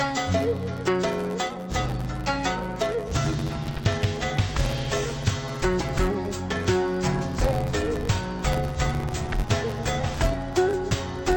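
Throughout, interleaved audio read as planar splits each 10.67 ms block, consistent with a 512-sample buffer, into half-speed halves, giving a dull, robotic buzz near 94 Hz.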